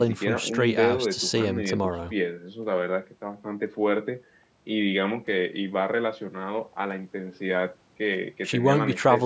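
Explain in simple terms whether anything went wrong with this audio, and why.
Nothing stood out on listening to this speech; the only processing you can hear is the ordinary microphone handling of a phone or video call, which trims away the very deepest bass, and that's expected rather than a problem.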